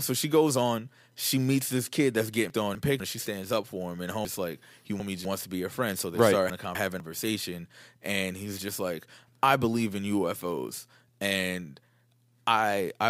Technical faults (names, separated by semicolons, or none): chunks out of order